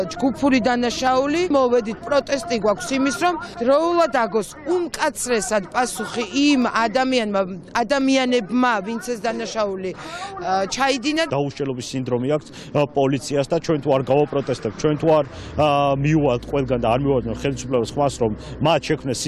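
Single sharp clicks at 1.07, 2.21, 5.27, 6.62 and 8.01 s are likely dropped samples, each a tiny fraction of a millisecond lost so the waveform jumps. Unlike a dropout, no audible gap follows, just a thin vertical spectral line.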